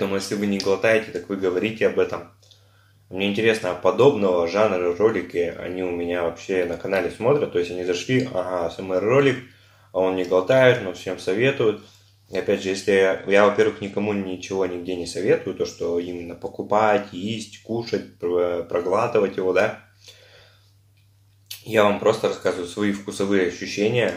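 A Bluetooth SBC bit pool drop runs from 13.18 to 14.09 s: the link's congestion forced the encoder's allocation down, which fits a fall from about 28 to 13, near 102 kbps, so the upper sub-bands starve, treble dulls and gritty quantisation noise surfaces until recovery.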